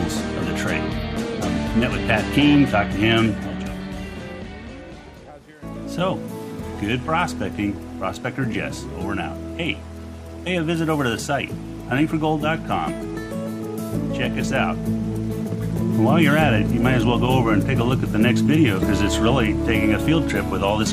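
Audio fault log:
17.82 to 20.63 s, train of clicks: something in the chain, likely interference from nearby equipment or a faulty connection, injects short pulses at about 6 per second with uneven spacing, roughly twenty in all, peaking near the level of the programme, so ticking and popping ride over the sound.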